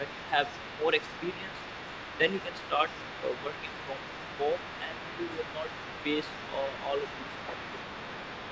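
A second, quieter voice runs underneath this call-path speech from 0.07 s to the end, sitting about 15 dB below the talker: the other side's voice leaking through, likely because the echo canceller left loudspeaker playback in the microphone signal. The talker's level dips by up to about 5 dB in patches from 0.0 to 1.49 s and again from 2.18 to 7.82 s, speech suppressed in double talk as the canceller likely turned everything down while both sides spoke, with the band topping out at 8 kHz from the call processing.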